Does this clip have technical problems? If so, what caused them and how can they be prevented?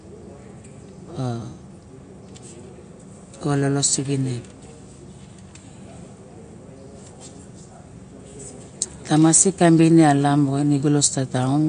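Yes. Throughout, the speech is watery and swirly, with nothing above 9.5 kHz. This is likely MP3 compression at a bitrate near 48 kbps. Unlike plain low-pass filtering, weak detail flickers on and off between frames. To prevent it, encode at a higher bitrate or keep the recording in a lossless format.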